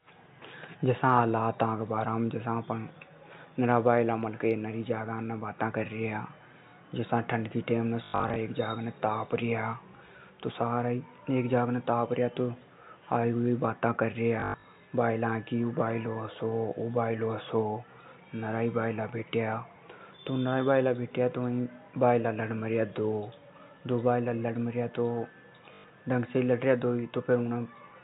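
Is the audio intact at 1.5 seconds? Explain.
Yes, the speech at 1.5 seconds is intact, carried through the G.711 telephone coding with its usual cut-off at 4 kHz and no fault at that moment.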